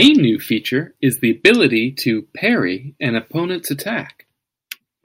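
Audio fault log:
0.00–0.08 s, hard clipping: the opening peaks of the speech are driven about 4 dB past the stage's ceiling, so their tops are sheared flat. That squaring adds high harmonics, heard as a brief harsh crackle just before "new feature is the".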